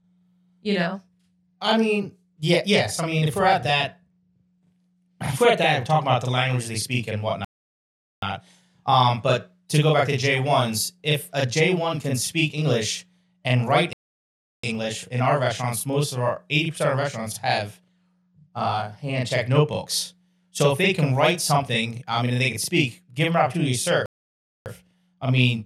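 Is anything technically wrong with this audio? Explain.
Yes, there are two problems in this speech clip.

Channel delay (doubling), throughout the whole recording: one channel arrives about 40 ms behind the other, and when the two are folded to mono both copies are heard at the same level. A 40 ms gap is too long to merge into one sound, so every syllable is followed by a close second copy. The result is a thick, doubled quality, like a short slap echo, on everything said.

Playback stall, three times: the audio cuts to silence mid-flow and then resumes. The first gap runs from 7.45 to 8.22 s (about 0.78 s), right after "language they speak and". The second runs from 13.93 to 14.63 s (about 0.70 s), after "and write". The third runs from 24.06 to 24.66 s (about 0.60 s), between "them an opportunity to" and "I mean just to". The likely cause is the player running out of buffered data or having its thread blocked, which leaves the output silent until it recovers.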